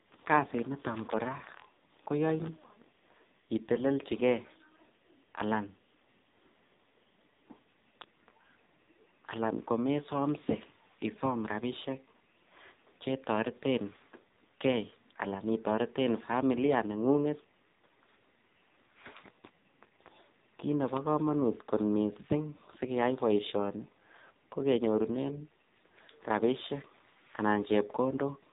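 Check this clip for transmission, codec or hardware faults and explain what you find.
The whole clip has passed through the AMR narrowband mobile codec, and the damage is heavy throughout. The speech is reduced to telephone bandwidth: nothing above 3.8 kHz survives. The codec rebuilds each 20 ms frame from a vocal-tract filter excited by a handful of pulses, and the sparse excitation makes the voice sound buzzy and synthetic. That points to one of AMR-NB's lowest modes, around 5.9 kbps. On a spectrogram the energy stops at a hard ceiling near 3.8 kHz, and the harmonics look smeared and blocky from frame to frame.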